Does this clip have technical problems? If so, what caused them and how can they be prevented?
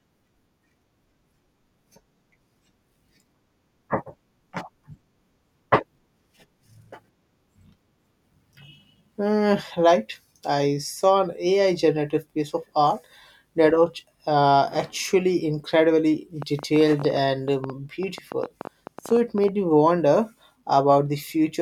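Yes. After "was uh actually incredibly", a train of clicks ticks from 16.42 to 19.49 s: about thirty similar pops at roughly ten per second, unevenly spaced and louder than the speech. The likely cause is interference from nearby equipment or a faulty connection or power supply. To prevent it, move phones and other devices away from the cables and interface, and use a stable, well-powered connection.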